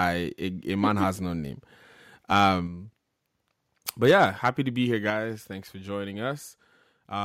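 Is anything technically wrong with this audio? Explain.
Yes. The speech distorts on its loudest moments, and the level then drops in steps.

Microphone overload shows up from 2.36 to 2.45 s and again from 4.04 to 4.48 s. It sounds like a harsh, crackly edge on the peaks, about 2 dB over at first and about 4 dB over on the second, longer stretch. A small fraction of the samples get flattened, around one or two percent. The likely cause is input gain set too high, so the peaks hit the converter's ceiling and lose their tops.

Microphone volume stepped down happens at 2.67, 4.11 and 5.1 s. Each time the level drops abruptly, voice and background together, by about 4 dB, then about 3 dB, then about 4 dB again. The first two land right on or just after the distorted peaks. That's consistent with the call software likely reacting to the overload and pulling the device's input volume down one notch at a time.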